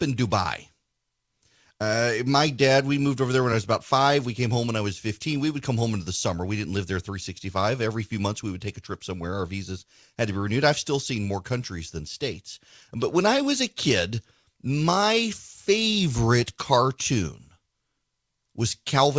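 Speech, with nothing technically wrong to report. It has passed through a WebRTC call path, and the absence of anything above 8 kHz fits a wideband call codec such as G.722.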